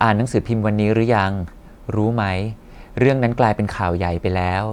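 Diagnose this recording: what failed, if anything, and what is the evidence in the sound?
Nothing failed; no stage in the chain shows faults.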